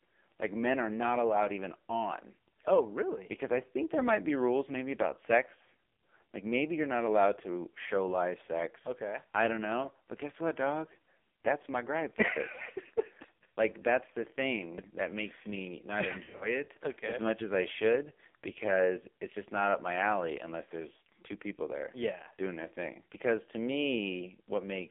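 Throughout, the speech sounds thin, buzzy and synthetic, confined to roughly 250 Hz to 3.5 kHz, with heavy codec damage. This is the AMR narrowband mobile codec: the voice is rebuilt from a coarse vocal-tract model with few pulses per frame, which fits a low mode around 5.9 kbps.

From 16.24 to 16.63 s, just after "that makes me not", the voice stutters into brief warbly dips and rough, smeared fragments. These are lost AMR speech frames. Short runs, the longest about 40 ms, are scattered across a 160 ms stretch, pointing to several failed frames. The decoder filled each gap by reusing the last good pitch and vocal-tract settings at fading gain.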